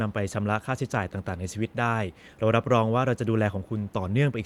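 No technical faults are audible.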